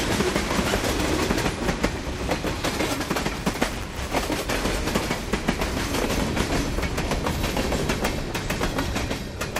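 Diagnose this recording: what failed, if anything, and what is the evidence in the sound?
Buffer tearing at the driver or buffer stage, from 3.34 to 4.14 s. Over that stretch the sound carries a steady robotic buzz at 200 Hz, which points to a buffer period of about 5 ms. The application writing the ring buffer and the hardware reading it have drifted into each other. In every period a small slice, roughly a twentieth, plays audio from about 10 ms earlier, with hard joins on both sides that produce the rattle.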